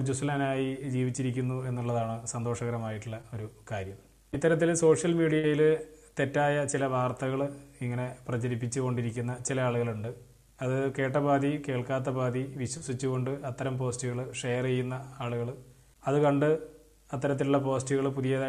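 At 3.21 s there is a short concealed packet loss. About 20 ms of sound never arrived and was patched by continuing what came just before, so it passes as a quick smear or wobble rather than a dropout. At 5.39 s a burst of packet loss runs longer. The patched sound holds and fades for about 45 ms, then the audio jumps ahead with roughly 40 ms missing. At 12.77 s another short concealed loss covers about 40 ms. It blends back smoothly instead of fading and skipping.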